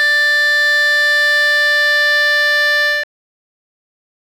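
At 3.04 s the music has a cut-off end: the final buffers never got written, so it stops mid-sound and drops straight to digital silence, no decay at all.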